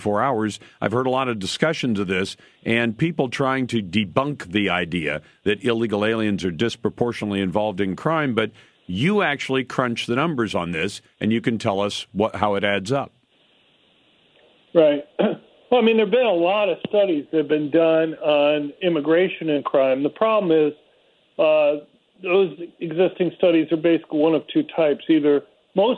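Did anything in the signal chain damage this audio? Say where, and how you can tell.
No, nothing I can hear points to any stage of the chain having damaged this audio, so there's nothing here to trace back.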